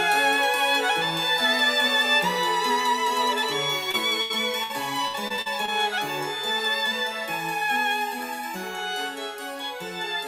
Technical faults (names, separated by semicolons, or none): short concealed packet loss; burst of packet loss; repeated packet loss (robotic sound)